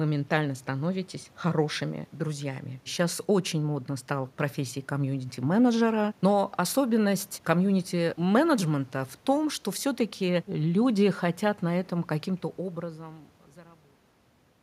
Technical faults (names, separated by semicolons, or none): none